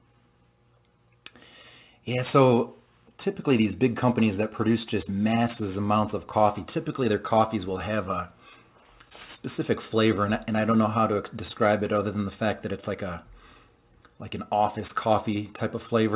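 No technical faults can be heard; the audio has passed through a call path whose narrowband codec leaves nothing above 4 kHz, which fits telephone-grade G.711 coding.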